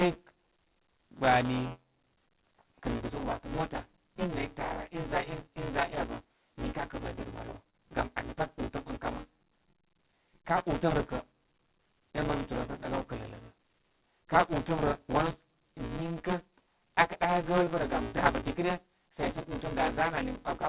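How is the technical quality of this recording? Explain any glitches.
The recording has a constant buzz from buffer tearing, plus three brief timing glitches in the call audio, all heard within the narrow band of a telephone-style codec that leaves nothing above 4 kHz.

Buffer tearing runs throughout. The writer and reader of the playback ring buffer have drifted so that they cross inside every period, leaving about a third of each buffer filled with audio from around 10 ms earlier. The hard joins repeat at 172 Hz, which fits a 256-sample buffer, producing a robotic rattle that sits on the speech whenever it is present.

Short stalls from late packets occur at 7.70 to 7.75 s and 8.47 to 8.51 s. Each time a packet arrived late, the jitter buffer emptied, so the receiver stretched the last sound, by 30 ms and then 15 ms, before resuming where it left off. Nothing is lost, but the sound hangs slightly with a faint buzz or dip.

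Short concealed packet loss occurs at 17.64 to 17.68 s, where 20 ms of audio never arrived. The receiver extrapolated from the preceding sound and then blended back into the real signal, leaving a brief smear or wobble in place of the missing audio.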